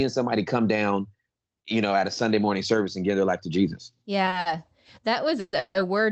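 Speech over a call path, with the top end limited to about 8 kHz, which fits Opus at around 24 kbps. Three short stalls from late packets come at 4.25 to 4.29 s, 4.29 to 4.34 s and 4.40 to 4.47 s. Each time the jitter buffer ran dry. The last sound is held for 20, 30 and then 50 ms before the audio resumes. Nothing is lost, but the sound drags with a slight buzz or dip. Two call audio freezes follow, at 5.40 to 5.55 s and 5.59 to 5.77 s. The last sound smears into a fading buzz or hiss for about 130 and 160 ms, ending in brief silence of 30 and 10 ms. The likely cause is packets held up in transit. Playback then picks up where it stopped, so the gaps add delay rather than cut anything.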